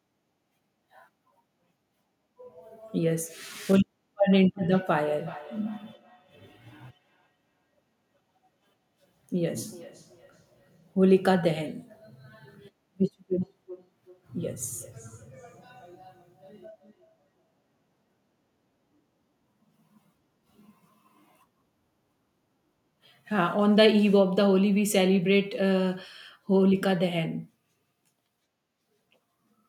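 Feedback echo between two devices affects this speech clip from 4.54 to 11.14 s and again from 13.41 to 17.65 s. The speech returns about every 400 ms, peaking at about 23 dB below the speech and then at about 34 dB below, as a second device's loudspeaker feeds another microphone that no echo canceller covers.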